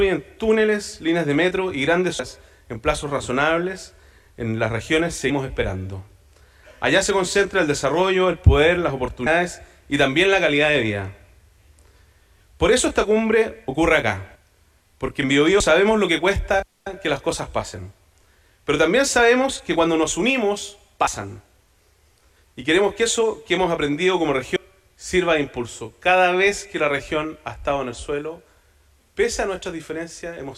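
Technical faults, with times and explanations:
2.19, 5.30, 9.26, 14.35, 15.60, 21.07 and 24.56 s: compressed frames skipped. The audio jumps ahead by roughly 400, 150, 150, 150, 70, 70 and 200 ms, which fits whole 32 ms frames going missing.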